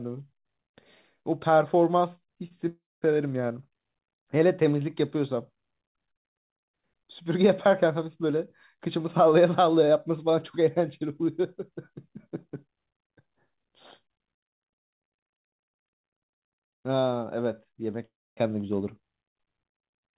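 Short concealed packet loss occurs from 2.48 to 2.52 s. About 20 ms of the speech arrived too late to decode, and the receiver patched the gap by extending the preceding sound before blending back. It comes across as a brief smear in the speech.

Long network dropouts follow at 2.68 to 3.04 s and again at 18.06 to 18.39 s, each likely caused by the network delivering no audio for roughly a third of a second. In the first, the last sound is stretched into a fading buzz or hiss before about 200 ms of silence. In the second, the buzz or hiss gives way to about 260 ms of silence. In both, the speech resumes further on with the missing portion simply gone. Because nothing is heard above 4 kHz, the concealment sound has the same muffled, telephone-band quality as the rest of the call, which fits a narrowband call codec.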